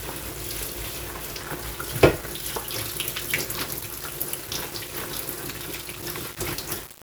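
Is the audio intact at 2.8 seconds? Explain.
No. At 2.8 seconds, and across the whole clip, the sound is grainy with low bit depth without dither. The grit sits only about 10 dB below the signal and rises and falls with it. Quiet passages sputter or collapse to silence. This likely comes from rounding to very few levels, which fits 6 bits, with no dither, so the error tracks the waveform. On a waveform this shows as visible staircase steps, with quiet stretches flattening out or flipping between two levels. A spectrogram shows broadband hash that appears with the sound and disappears in its gaps.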